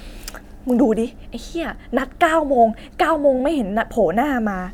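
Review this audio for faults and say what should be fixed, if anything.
Nothing here needs fixing, since no faults turn up anywhere in the speech.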